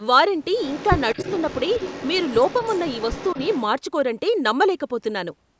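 From 0.55 to 3.62 s, a faint, delayed copy of the speech trails behind it, arriving about a quarter of a second late (248 ms) and sitting about 15 dB below the direct voice, so it sounds like a ghost a beat behind the voice. This is an echo leak, most likely from a far end playing the call over a loudspeaker, where the echo canceller left part of the microphone pickup in place and returned it down the line.

Inside that stretch, from 1.14 to 1.18 s, the speech briefly sinks for about 40 ms, dropping by roughly 15 dB, a short duck in level rather than a full cut. This is speech suppressed in double talk. With the echo and the live talker overlapping, the echo canceller probably could not tell the two apart and pulled the level of both down for that moment.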